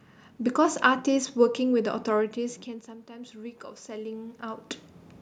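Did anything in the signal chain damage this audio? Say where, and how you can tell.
Yes. Automatic gain rising, from 2.35 to 4.48 s, in the call processing: after the talker moves back around 2 s, the level falls about 16 dB, and the gain control slowly lifts it about 5 dB, so the room noise swells along with the speech.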